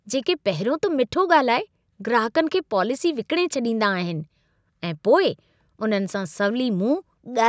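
Nothing here counts as a fault: the speech has simply been through a call's usual microphone processing, so the deepest bass is trimmed away and nothing reaches above 8 kHz, which is just how that path normally sounds.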